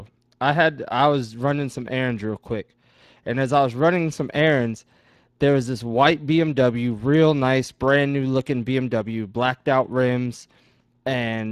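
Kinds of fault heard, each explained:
Speex codec, throughout: this CELP speech codec, short of bits for the excitation, leaves plainly audible coding damage that fits a rate near 22 kbps; nothing sounds above 15.3 kHz.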